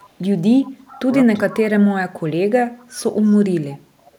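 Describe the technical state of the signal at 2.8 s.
Speech suppressed in double talk runs from 1.95 to 3.08 s. The echo canceller likely mistook overlapping talk for echo, so the speech dips by roughly 30 dB.

Echo leak appears from 2.79 to 2.84 s. Residual loudspeaker pickup was likely passed back, giving a faint delayed copy about 340 ms late and roughly 40 dB below the speech.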